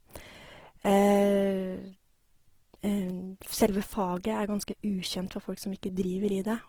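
Throughout, the speech sounds grainy and rough, its detail noisy yet reaching about 20.3 kHz, likely Opus compression in music mode near 16 kbps.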